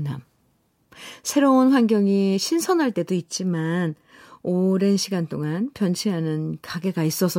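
No technical faults can be heard anywhere in the recording, and the signal stays steady and intact throughout.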